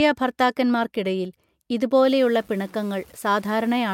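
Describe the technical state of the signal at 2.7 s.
Low bit depth without dither is present at 2.7 s, within a span from 2.07 s to 3.93 s. The speech likely went through coarse truncation, consistent with about 7 bits, so the rounding error follows the signal and sits roughly 30 dB below it. Quieter passages turn gritty and grainy.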